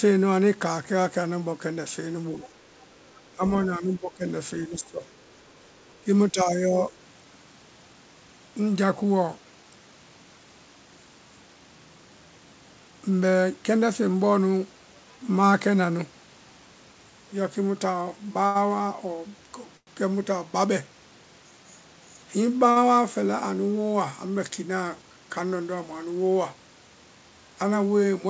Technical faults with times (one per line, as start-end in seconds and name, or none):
2.38-2.50 speech suppressed in double talk
2.43-2.49 other side's voice leaking through
3.09-3.31 other side's voice leaking through
3.32-4.25 speech suppressed in double talk
4.58-5.04 speech suppressed in double talk
5.94-5.99 other side's voice leaking through
6.02-6.96 speech suppressed in double talk
18.46-18.57 short stall from a late packet
19.77-19.89 call audio freeze
22.71-22.78 short stall from a late packet
24.77-25.03 jitter buffer speed-up